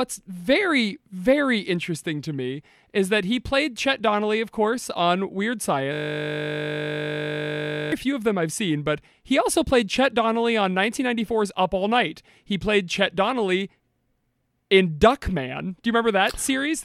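From 5.93 to 7.92 s, a system hang loop repeats one 20 ms slice about 100 times. This makes a steady 50 Hz buzz before "few of them I've".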